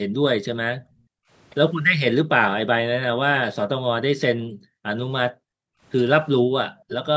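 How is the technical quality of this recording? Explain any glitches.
The recording has two kinds of call-processing glitch. Both are linked to echo cancellation on a speakerphone path. The audio tops out at 8 kHz, as the call's microphone processing allows.

Background gated by the echo canceller occurs at 0.05–0.21 s, 0.77–1.3 s, 4.38–4.84 s, 5.32–5.82 s, 6.4–6.54 s and 6.72–6.88 s. The canceller suppressed the microphone while the far end played. Room sound drops by about 20 to 40 dB, then returns.

A brief echo leak follows at 6.88–6.95 s. A faint delayed copy of the sound arrives roughly half a second late. It sits about 15 dB below the speech. The likely cause is the canceller failing to remove all of the loudspeaker pickup.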